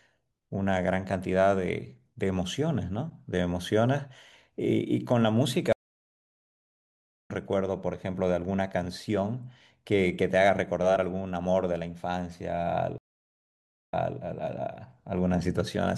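Stream reconnects at 5.73 to 7.31 s and 12.98 to 14.19 s: the connection dropped, the speech went silent for 1.54 s and then 0.92 s, and a fresh decoder resumed mid-stream, first skipping ahead by about a second and a half, then replaying 0.29 s.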